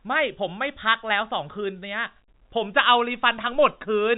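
Nothing goes wrong anywhere in this bit of speech, which simply carries the narrow telephone sound of G.711 coding, with everything above 4 kHz gone.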